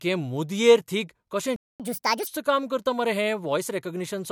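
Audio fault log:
1.56–1.80 s, playback stall: the speech cuts to silence for about 235 ms, then resumes where it stopped. A gap of this kind in mid-flow is likely the player running out of buffered data or its output thread being blocked.
1.80–2.27 s, catch-up at higher speed: after the gap the speech runs at 1.5 times normal speed, with pitch raised by roughly seven semitones, because the backlog is resampled to recover lost time. Normal speed returns just before "काम करता".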